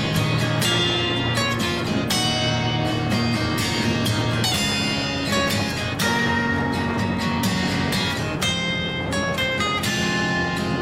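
No technical faults are audible.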